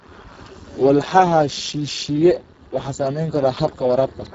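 Throughout, a Speex codec starved of excitation bits, fitting a very low bitrate, leaves the speech hoarse and noisy, with nothing above 7.7 kHz.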